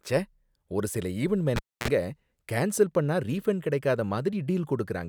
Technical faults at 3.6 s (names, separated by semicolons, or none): none